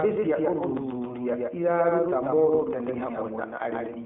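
From start to finish, the speech is carried on a doubled audio track. A second, equally loud copy trails the original by roughly 150 ms, flat and dry, with no room decay. This likely comes from the signal being captured twice, once through a slower path.

Throughout the clip, the speech also shows iLBC codec damage. The sound is confined to a telephone band of roughly 200 Hz to 3.4 kHz, with nothing above 3.6 kHz. Because each frame is coded independently, consistent with 20 ms frames and the 15.2 kbps mode, the speech takes on a plainly audible rough, synthetic texture.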